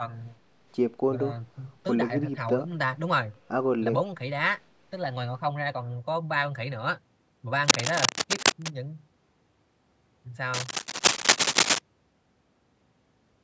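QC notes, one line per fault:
7.64 to 8.68 s and 10.54 to 11.79 s, cable scratch noise: two patches of dense, ragged crackle over the speech, the second louder at about 10 dB above the signal against about 5 dB for the first. It sounds like a worn lead or connector being moved, with the contact resistance likely jumping around.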